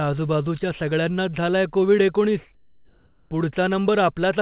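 A speech clip heard through a call path that stops at 4 kHz, which fits G.711 mu-law at 64 kbps. Comfort noise in place of the background runs from 2.55 to 3.31 s, just after "सगळ्यांनाच झालाय कोविड एकोणीस". The textured background, about 37 dB below the loud parts, becomes flat, featureless noise for 760 ms, shifting level by about 4 dB. The likely cause is discontinuous transmission, with the receiver synthesising filler noise.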